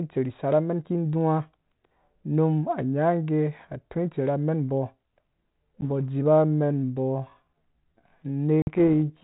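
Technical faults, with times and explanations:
5.81 s and 8.62–8.73 s, packet loss on an ADPCM call: a hard-edged gap of about 10 ms, then a longer one of about 50 ms, which sounds like roughly one and then five packets. When the speech returns it is slightly distorted for a moment while the decoder's predictor and step size catch back up with the sender.
6.24 s to the end, time-stretched section: the pace suddenly slows to about 0.65 times the original speed but the pitch stays the same. It drags, likely from software repeating short slices to lengthen the audio.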